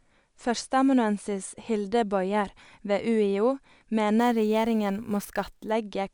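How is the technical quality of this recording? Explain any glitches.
Between 4.19 and 5.71 s a bright, metallic fizz rides on top of the speech. It swells and fades with the speech level and sits about 26 dB below it. This is imaging from sample-and-hold upsampling. The audio appears to have been raised from roughly 22 kHz to 48 kHz by repeating each sample without a smoothing filter. That leaves a mirrored copy of the spectrum folded around the old rate, landing between about 11 kHz and 22 kHz.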